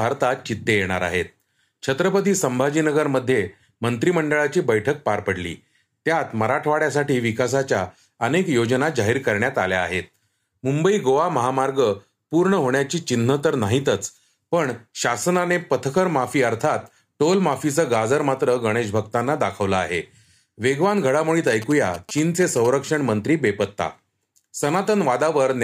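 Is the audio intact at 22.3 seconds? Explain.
No. From 21.47 to 22.67 s, GSM signalling bursts get into the audio: a nearby 2G phone sending short groups of radio bursts while signalling, which the audio circuit rectifies into the signal path. At 22.3 s this is audible as a galloping dit-dit-dit of short buzzes at about 217 Hz, sitting roughly 15 dB below the speech.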